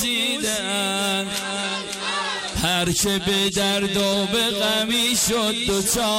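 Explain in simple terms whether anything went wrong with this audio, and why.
Nothing went wrong with this audio.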